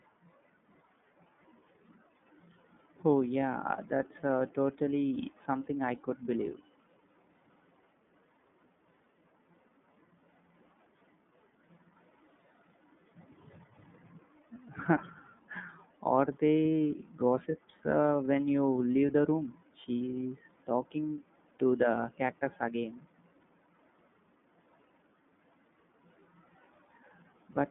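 Throughout, the speech sounds thin, muffled and a little rough and synthetic, with plainly audible coding damage and nothing above 3.8 kHz. The cause is the iLBC codec: a narrowband line passing 150 Hz to 3.6 kHz, coding each frame independently, consistent with its 30 ms, 13.33 kbps mode.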